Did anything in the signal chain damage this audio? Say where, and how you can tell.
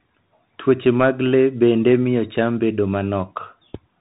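Yes. Throughout, the speech is dull above 3.8 kHz, with scratchy s sounds and granular hiss underneath. That points to the codec stage: the Bluetooth CVSD headset codec's one-bit adaptive steps.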